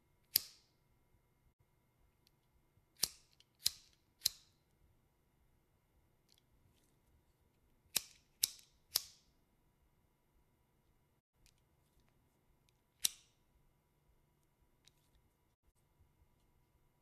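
Digital broadcast dropouts occur at 1.52 to 1.61 s, 11.19 to 11.35 s and 15.53 to 15.77 s. The receiver muted on missing or corrupt frames, fading out over 20 ms, and the sound was lost for 48 ms, then 120 ms, then 96 ms in short holes, the longest 72 ms.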